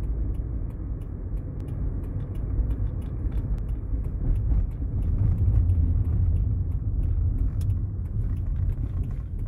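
From 1.60 s to 3.58 s a doubled audio track appears: a second full-band copy of the sound trails the original by roughly 0.7 s, a few dB quieter. It starts and stops abruptly and carries no decay or room colour, which separates it from an echo or reverb. The likely cause is a second capture path or an edit holding two copies out of step.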